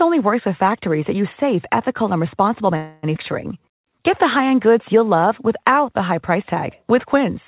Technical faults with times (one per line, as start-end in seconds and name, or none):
2.76-3.05 call audio freeze
3.15-3.17 skip ahead
3.60-5.73 jitter buffer slow-down